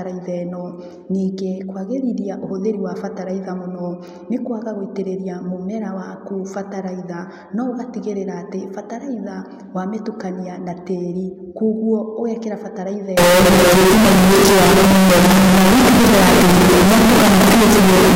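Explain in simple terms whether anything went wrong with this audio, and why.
A float read as integer fault runs from 13.17 s to the end: the speech suddenly turns extremely loud and harsh, with background hiss as loud as the talking. The likely cause is decimal-style sample numbers being read as plain whole numbers, squaring off the waveform.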